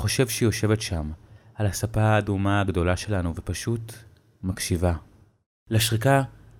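No technical faults can be heard anywhere in the recording.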